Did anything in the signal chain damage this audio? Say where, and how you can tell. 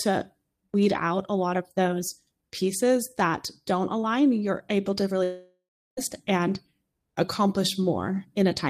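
Yes. A long network dropout hits from 5.23 to 5.99 s, after "align you're able to." The sound smears into a fading buzz, then silence, and 0.74 s is gone, likely lost packets.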